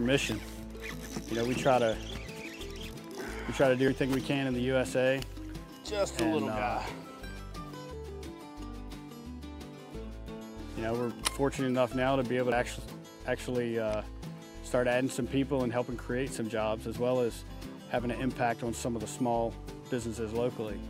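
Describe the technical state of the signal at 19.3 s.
At 19.3 s the signal is intact, with no audible fault of any kind at that moment.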